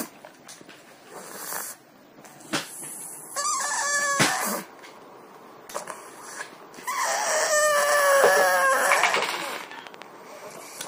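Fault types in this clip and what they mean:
Train of clicks: from 8.10 to 10.03 s, identical ticks come evenly at 13 per second, around 10 dB above the sound, likely from interference. A single click or random crackle lacks this regular spacing.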